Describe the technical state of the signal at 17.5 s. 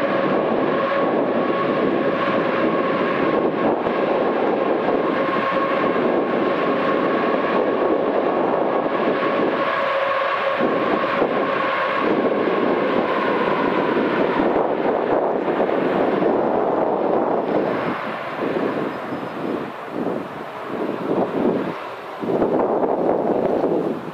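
At 17.5 s the signal is intact, with no dropout, distortion, glitch or other fault to be heard at that point.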